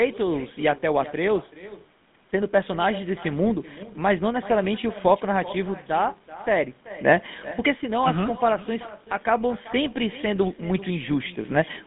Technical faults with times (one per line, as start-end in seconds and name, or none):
0.00-11.86 echo with no canceller
0.00-11.86 GSM full-rate codec